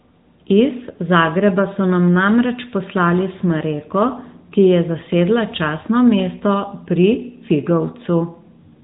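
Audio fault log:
Throughout: AMR narrowband mobile codec. The speech sits in a telephone band with nothing above about 3.8 kHz, so it sounds boxed-in and dull, with sibilants smeared. The bitrate is around 10.2 kbps, near the top of AMR-NB's range, and the damage is plainly audible: the codec rebuilds each 20 ms frame from a vocal-tract model fed by a handful of pulses, which leaves the voice with a buzzy, synthetic edge.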